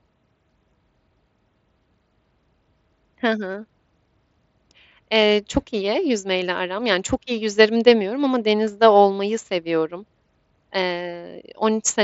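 No technical faults are audible.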